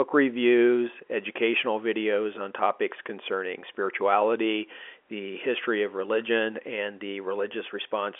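Nothing stood out on listening to this speech, which carries the narrow band of an ordinary G.711 telephone line with nothing heard above about 3.7 kHz.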